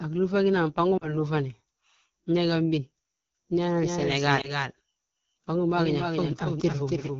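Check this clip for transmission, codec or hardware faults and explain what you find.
Three faults are present: plainly audible AMR wideband coding throughout, two short lost AMR speech frame events, and a doubled audio track from 3.83 s to the end.

AMR wideband (HD Voice) codec: The whole clip sounds rough and raspy, which fits a low rate near 8.85 kbit/s. The vocal tract model and sparse pulse excitation smear detail below 6.4 kHz. A spectrogram shows a hard ceiling near 7 kHz, with the 6.4 to 7 kHz band filled by featureless noise.

Lost AMR speech frames: At 0.97 to 1.12 s and 4.41 to 4.67 s the decoder lost 40 ms and then 20 ms of data, about two frames and then one. It repeated the last pitch and vocal tract settings at falling gain, so the first gap drops to near silence and the second is a brief warble or dip, each recovering weakly. The waveform shows a short sag in amplitude. 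The spectrogram shows frozen, blurred harmonics.

Doubled audio track: From 3.83 s onward the audio is accompanied by a second copy about 5 dB quieter, trailing by roughly a third of a second. It is likely a second capture through a slower path. The copy has no decay or room colour and starts abruptly. On a spectrogram, each pattern reappears shifted right by about 0.3 s.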